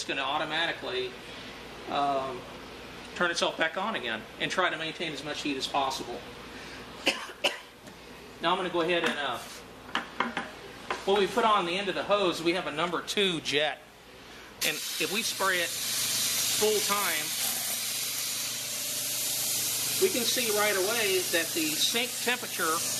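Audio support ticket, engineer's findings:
Nothing stood out on listening; no fault observed in the recording.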